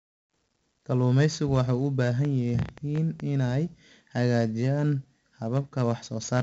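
It's a speech clip, and the whole thing carries heavy 4-bit ADPCM compression: a gritty hiss that rides on every loud stretch, with roughness on sharp onsets where the coarse 4-bit steps can't keep up. Nothing survives above 7.8 kHz, and at 64 kbps that fits a 16 kHz sample rate, so it sounds dull as well. From 2.25 to 3.21 s there's a train of clicks, about ten of them at roughly 8.4 per second, unevenly spaced and popping out well above the speech. Likely cause is interference or a faulty connection.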